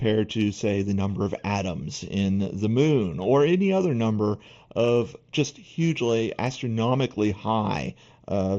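Across the whole speech clip, channel delay (comb filtering) colours the sound: one channel trails the other by roughly a third of a millisecond, and when the two are summed to mono the shared content cancels at regularly spaced frequencies, the first near 1.5 kHz. The speech sounds hollow and phasey. A spectrogram shows fixed dark horizontal bands at about 1.5 kHz and again near 4.5 and 7.5 kHz, below the 8 kHz ceiling of the mSBC headset link.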